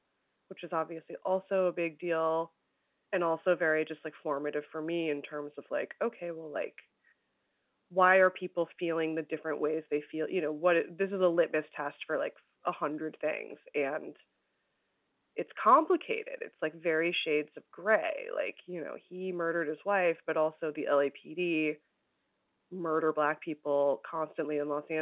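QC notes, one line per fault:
No faults found; the speech runs over an A-law G.711 telephone path at 8 kHz, with the band topping out at 4 kHz as that format dictates.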